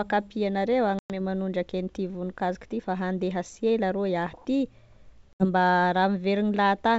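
Hard-edged holes of silence cut the speech at 0.99 to 1.12 s and 5.33 to 5.45 s, each followed by a slightly distorted restart. This is packet loss on an ADPCM call: about 110 ms and 70 ms went missing, and the decoder's adaptive predictor and step size lost track of the sender's until they resynchronised. The G.722 wideband coding around these gaps carries speech clearly up to its upper band.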